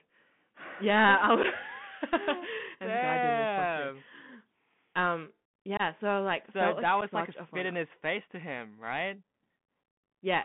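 From the start the speech carries the Bluetooth CVSD headset codec. A one-bit delta modulator, consistent with a 64 kbps link, traces the waveform with an adapting step, leaving scratchy sibilants and granular hiss. A spectrogram shows energy confined to 150 Hz to 3.4 kHz, with a speckled noise floor.

Unconcealed Bluetooth headset packet loss then punches silent holes: about 7.5 ms at 1.43 s, 22.5 ms from 5.77 to 5.81 s, and 7.5 ms from 7.01 to 7.03 s. These fit one, three and one lost packets. Each gap has hard edges. The waveform shows flat dropouts, and the spectrogram shows thin vertical gaps.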